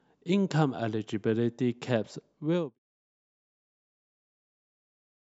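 There are no technical faults in this speech clip, which simply fades out smoothly from around 2 s to 2.79 s.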